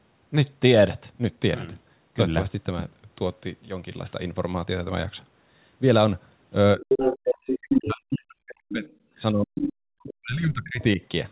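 At 6.77 s the speech dips by about 15 dB for roughly 70 ms. This is speech suppressed in double talk: the echo canceller likely mistook overlapping talk for echo and turned it down. From 6.88 to 7.59 s a second voice comes through only about 5 dB below the speech. This is the other side's voice leaking through, likely loudspeaker playback the canceller failed to remove. From 7.61 to 8.86 s the speech collapses by about 40 dB for around a second, the same double-talk suppression at a much deeper level. It returns at 9.32 to 9.54 s with another drop of about 40 dB. The leak follows right after, from 9.55 to 9.73 s, again about 5 dB under the speech. From 9.99 to 11.01 s the speech is pushed down by about 40 dB for about a second. Inside that stretch, at 10.09 to 10.14 s, a faint scrap of the other voice surfaces about 20 dB below speech level. All of this sits within the narrow band of the call path, which has nothing above 4 kHz, as fits the G.711 codec.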